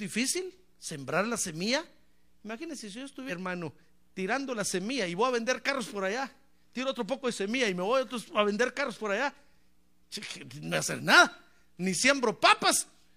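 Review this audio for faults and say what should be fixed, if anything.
Damaged data in the compressed stream gives brief glitches at 3.25–3.31 s, right after "semilla imagínense si yo", and at 10.68–10.73 s. The decoder misreads corrupted frames and resyncs at the next frame header. Transfer or store the file with checksums and re-fetch it from an intact source.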